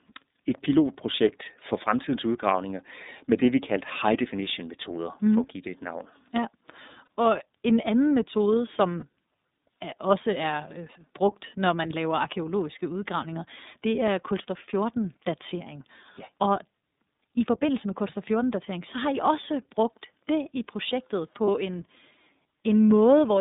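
The speech has passed through an iLBC codec that codes every 30 ms frame on its own, which fits its 13.33 kbps mode. The band is held between 200 Hz and 3.7 kHz, so the sound is muffled and plainly rough and synthetic throughout.

Packets carrying lost iLBC frames then leave three brief gaps: at 7.06 s, just before "og en anden metode"; from 8.99 to 9.04 s, right after "og en anden metode"; and from 21.46 to 21.48 s, after "brugt det i projektet". Each gap fits a single missing 30 ms frame. The decoder fills it by repeating the last pitch cycle blended with noise, heard as a short buzzy, held vowel. The speech recovers immediately afterwards.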